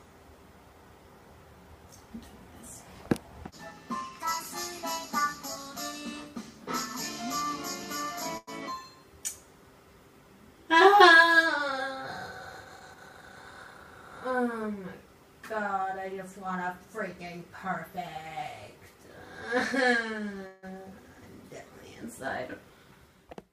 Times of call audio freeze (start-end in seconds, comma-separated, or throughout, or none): 20.47-20.65